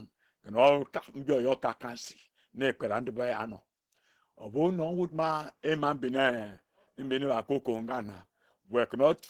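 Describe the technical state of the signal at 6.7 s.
At 6.7 s the speech carries Opus compression damage, as it does for the whole clip. The sound is plainly degraded: muffled and hoarse in the lower range, with a grainy, noisy upper band. That is likely the codec's hybrid mode at a low rate, fitting roughly 16 kbps, with a speech coder handling the lows while the highs are filled by folded bands and noise. A spectrogram would show smeared, blotchy upper frequencies without clean harmonic detail.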